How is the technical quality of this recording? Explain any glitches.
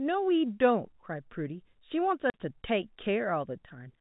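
The speech has the narrow, band-limited sound of G.711 telephone coding, with nothing above 4 kHz, and one clear glitch. At 2.30 s the speech drops out for 40 ms, leaving a hole with hard edges. This is packet loss filled with silence: the receiver got no data for that stretch and played silence instead. A 40 ms hole fits four lost 10 ms packets.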